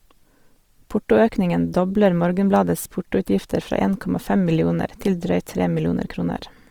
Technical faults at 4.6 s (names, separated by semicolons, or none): Opus compression